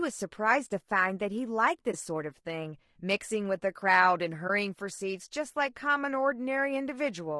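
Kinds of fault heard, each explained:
Low-delay AAC compression: Throughout the speech there is a rough, grainy texture, with noise filling the gaps between pitch harmonics and a thin, synthetic-sounding top band. This is likely AAC-ELD coding at a low rate, plausibly around 32 kbps, where short frames resolve harmonics poorly.
AAC frame loss with muting: At 1.91 to 1.94 s and 4.47 to 4.50 s the speech briefly drops out. In each case one coded frame is missing and its spectrum is zeroed. Overlapping windows fade the sound out and back in, leaving brief dips.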